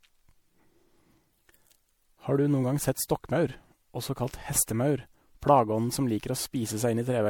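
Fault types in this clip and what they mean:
Generation loss: the speech has a swirly, hollow, smeared quality throughout, with consonant attacks softened, more degraded than a single pass at around 96 kbit/s MP3 would give. This is likely from the audio being decoded and re-encoded about four times, each pass requantising on a shifted frame grid so the errors compound. On a spectrogram, scattered holes and blotchy gaps fill the upper bands below a ceiling near 20.4 kHz, and transients look smeared in time on the waveform.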